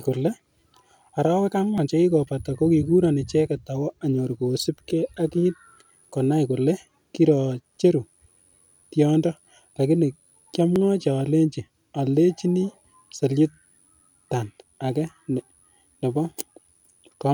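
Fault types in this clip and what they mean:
Audio missing between chunks: brief skips at 1.78, 4.77, 7.77, 10.76, 13.75 and 16.75 s, 3 s apart, each losing a few milliseconds of speech with the two sides joined directly, likely the recorder dropping a sliver as it closes one 3 s chunk and opens the next.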